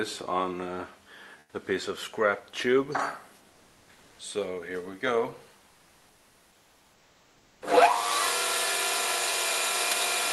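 Comfort noise in place of the background at 1.39–1.53 s, 3.49–4.19 s and 5.69–7.61 s: transmission likely paused during these quiet gaps, so the detailed background becomes steady, featureless synthetic hiss, up to about 5 dB quieter.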